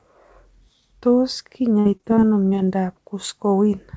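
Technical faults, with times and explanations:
1.80–2.69 s: repeated packet loss (robotic sound). Seven short gaps break the speech, the longest 54 ms. Each is patched by stretching the sound just before it, 173 ms in all, roughly a fifth of the stretch, so the recycled fragments turn choppy.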